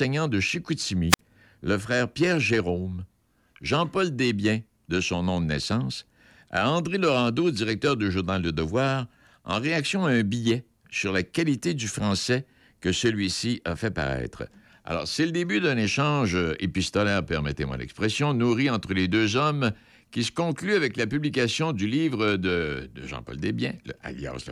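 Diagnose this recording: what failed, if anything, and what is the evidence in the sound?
The wireless link dropped out: at 1.09 s there's a quick hiss burst, then about 55 ms of silence until 1.19 s. That's a classic wireless microphone squelch dropout.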